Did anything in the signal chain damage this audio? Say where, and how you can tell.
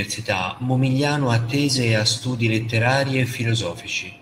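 No, nothing in the signal chain has damaged this speech recording. No stage from capture through to playback leaves any audible trace on it.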